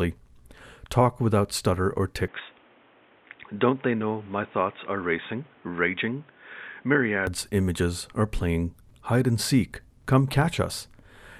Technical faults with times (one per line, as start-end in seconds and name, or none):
2.28-7.27 input switched to a poorer device